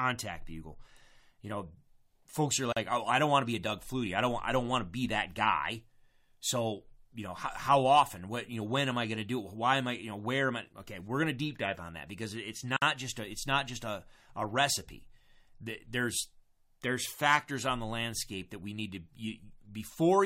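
This speech recording was assembled from separately encoded pieces that were joined without trimming the encoder's start-up delay and end padding, leaving a gap at a join of encoded pieces roughly every 10 seconds. Between 2.73 and 2.77 s, after "folks are" and before "oh I don't want", the sound drops out for about 40 ms. A second gap of about 54 ms runs from 12.77 to 12.82 s, between "on that because it's" and "just a it's not". Each has smeared edges before the speech resumes.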